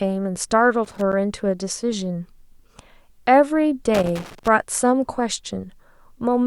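Loose connector crackle breaks into the speech from 0.85 to 1.13 s and again from 3.94 to 4.48 s: a worn contact chopping the signal, heard as irregular scratchy bursts rather than evenly spaced clicks.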